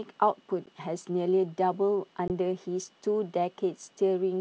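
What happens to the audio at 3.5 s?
Nothing goes wrong at 3.5 s: the speech carries on intact through that moment, passing cleanly through G.722 wideband telephone coding at 64 kbit/s with no more than a faint trace of the codec.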